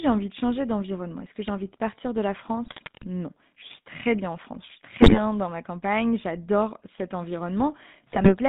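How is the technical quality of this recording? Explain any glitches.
The speech passes through a GSM full-rate codec for its whole length, and three short bursts of GSM bit errors break it up further.

The GSM full-rate codec is audible throughout. The line band runs from about 150 Hz to 3.7 kHz, so the top end is missing. The codec rebuilds the voice from a vocal-tract filter driven by a sparse, regularly spaced pulse excitation. That coarse excitation gives the speech a buzzy, gravelly roughness, consistent with a 13 kbps full-rate stream.

GSM bit errors occur at 2.65–3.06 s, 5.00–5.19 s and 8.10–8.35 s. Corrupted bits reach the decoder and damage the transmitted filter, pitch and gain parameters. The affected frames get a distorted spectrum or sudden level jumps, heard as squawks, pops and gargling. The burst at 5.00–5.19 s has the highest error rate, a couple of percent.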